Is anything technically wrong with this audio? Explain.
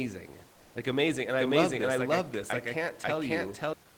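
Yes, there are two faults.

From 0.53 to 0.75 s, the sender likely stopped transmitting during a pause (discontinuous transmission, as in Opus DTX), so the receiver filled 220 ms with synthetic comfort noise in place of the background. The real room noise, about 32 dB below the speech, turns into a flat, featureless hiss, about 1 dB different in level.

From 1.39 to 3.73 s, a doubled audio track runs: a second, full-band copy of the speech trails the original by about half a second at roughly equal loudness, likely from a slower capture path. It has no decay or room colour and starts and stops abruptly.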